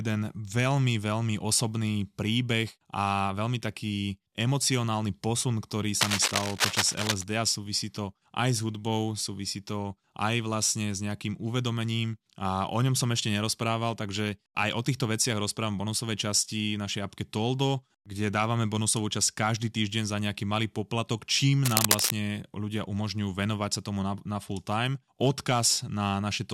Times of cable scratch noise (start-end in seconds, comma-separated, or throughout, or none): 6.01-7.24, 21.64-22.11